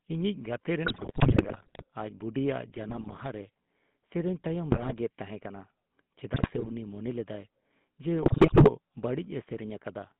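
The whole clip runs through the GSM full-rate codec. The band is cut to about 150 Hz at the bottom and 3.5 kHz at the top. The speech has a plain buzzy, gravelly roughness. That grain comes from the codec rebuilding the voice from a vocal-tract model driven by sparse, regular pulses. The sound fits the old 13 kbps full-rate scheme.

GSM bit errors then break through five times. The first runs from 0.86 to 1.85 s. The next runs from 2.76 to 3.21 s. Another runs from 4.72 to 4.93 s, just before "ᱛᱟᱦᱮᱸ ᱠᱟᱱᱟ". Then come 6.32 to 6.73 s and 8.22 to 8.69 s. Corrupted filter, pitch and gain values reach the decoder. Frames come out with a bent spectrum or a sudden jump in level. The speech squawks, pops and gargles. The first and last bursts sound the most broken.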